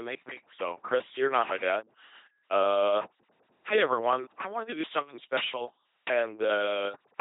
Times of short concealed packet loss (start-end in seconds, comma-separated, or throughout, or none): none